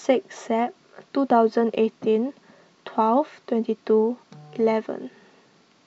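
No technical faults can be heard anywhere in the recording.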